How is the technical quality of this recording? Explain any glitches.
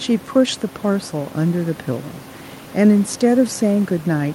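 Nothing stood out on listening to the speech, with only a faint room noise sitting about 22 dB below it.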